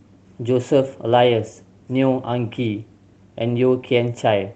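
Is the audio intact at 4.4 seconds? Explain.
Yes, at 4.4 seconds the speech comes through intact, carried over the WebRTC call path with nothing disrupting it at that moment.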